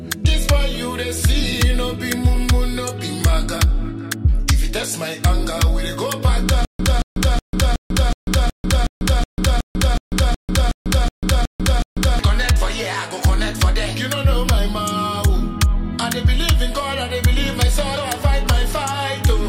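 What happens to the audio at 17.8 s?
Nothing goes wrong at 17.8 s; the audio plays through that moment intact, with no dropout, click, distortion or other fault.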